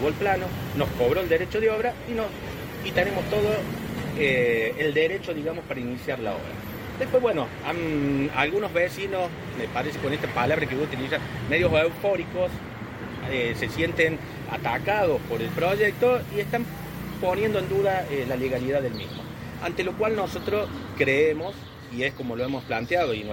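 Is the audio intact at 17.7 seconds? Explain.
Yes, at 17.7 seconds the audio is intact, with no dropout, click, distortion or other fault at that point.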